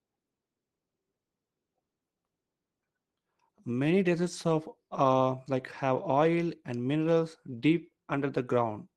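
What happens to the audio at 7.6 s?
Nothing goes wrong at 7.6 s: the speech carries on intact through the call path, with only the steady coding character and upper-band limit of an Opus-style call link that runs through the whole recording.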